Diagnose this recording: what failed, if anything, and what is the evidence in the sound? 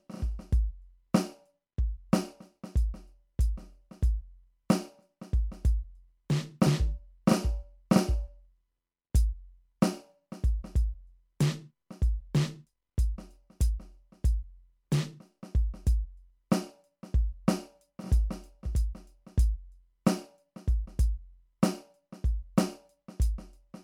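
The damage is at the codec stage, and it runs through the whole piece of music: generation loss. The sound has that swirly, hollow quality with smeared transients, more washed-out than a single 128 kbit/s MP3 would give you. That fits the audio having likely been decoded and re-encoded to MP3 around seven times, each pass quantising again on a shifted frame grid, so the noise and spectral holes keep piling up and attacks go soft.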